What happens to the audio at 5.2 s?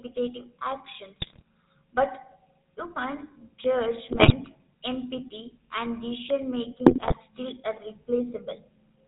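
At 5.2 s the speech carries GSM full-rate codec damage, present throughout: pulse-driven vocal-tract modelling, consistent with roughly 13 kbps, gives buzzy, gravelly roughness, with a spectrogram showing nothing above 4 kHz.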